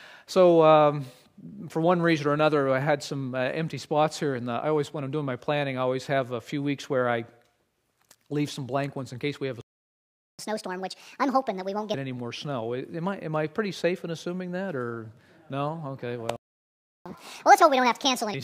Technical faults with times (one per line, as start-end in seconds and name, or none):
9.61-10.39 playback stall
10.39-11.94 catch-up at higher speed
16.36-17.06 playback stall
17.06-18.34 catch-up at higher speed